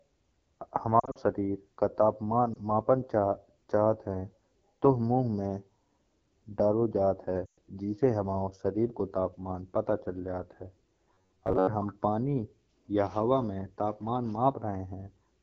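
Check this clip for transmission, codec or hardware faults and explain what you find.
The speech shows three faults: heavy codec coding throughout, several bursts of lost speech frames, and one stretch of robotic buzzing.

AMR wideband (HD Voice) codec, throughout: the coarse texture fits the AMR-WB codec at 8.85 kbit/s, its second-lowest rate. Too few bits reach the pulse-driven vocal tract model to shape the excitation well, so the speech sounds plainly rough and raspy.

Lost AMR speech frames at 1.00–1.18 s, 2.53 s and 7.46–7.58 s: when corrupted frames arrive, the decoder reuses the last good pitch and vocal tract settings with falling gain. Around 1.0 s, about 100 ms vanishes in short gaps of up to 40 ms, giving a warbly stutter. At 2.53 s a single 20 ms dip is heard. At 7.46 s a 120 ms gap smears and fades before "जिससे हमाओ शरीर को".

Robotic sound from repeated short buffers, 11.14–11.67 s, between "पता चल जात है" and "हम पानी या हवा": this is likely caused by audio arriving too seldom, so a short snippet is replayed repeatedly across most of the span. 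The replay imposes a fixed metallic buzz at 93.8 Hz, which fits a buffer of about 10.7 ms.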